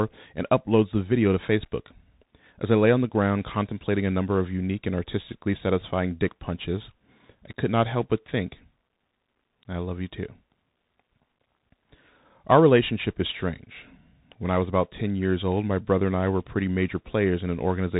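Bluetooth CVSD headset codec, throughout: the speech is squeezed through a one-bit delta coder, which fits a 64 kbps CVSD stream, so nothing above 3.8 kHz survives. Its adaptive step lags loud high sounds, leaving s sounds scratchy over a granular hiss, and the codec damage is plainly audible.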